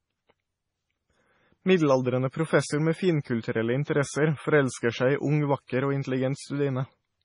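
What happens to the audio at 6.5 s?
At 6.5 s the speech carries the same damage heard through the whole clip. It sounds like MP3 compression. Nothing comes through above about 10.5 kHz, so the treble is cut off flat. The likely cause is an encoder short of bits, which fits a very low bitrate around 24 kbps. It drops weak frequency lines, and they flicker on and off between frames. The result is a watery, swirly texture, with chirpy s sounds and smeared onsets.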